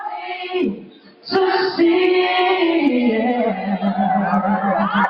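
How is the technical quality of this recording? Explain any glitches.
The recording has two related faults, both caused by a speech-oriented noise suppressor processing material it wasn't built for.

Throughout the clip, a noise suppressor is applied to sounds it misreads. It treats steady or lingering parts of the sound as background noise and pulls them down, while onsets pass. The level therefore swings by around 10 dB as the processor clamps and releases. On a waveform, the envelope rises and dips irregularly. On a spectrogram, sustained bands and decays fade in patches instead of holding steady.

From 0.15 to 1.3 s, for about a second in total, the noise suppressor cuts the sound harder than elsewhere, with the deepest drop at about 17 dB. The processor judged this stretch as noise, so held or decaying portions sink or end early while sharp attacks remain. The waveform shows a visibly shrunken section. 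The spectrogram shows a darker, thinned region with truncated tails.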